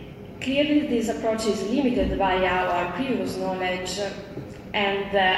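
Nothing technically wrong can be heard in this audio. No faults show up at any point in the clip.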